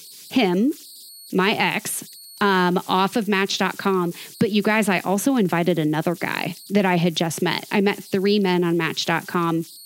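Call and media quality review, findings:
Converter idle tones, throughout: whistle around 4 kHz in pauses, grainy noise under quiet speech, about 24 dB below signal. Probable component: undithered delta-sigma ADC looping bit patterns at low input. Unlike fixed mains hum, the pitch is set by the input offset.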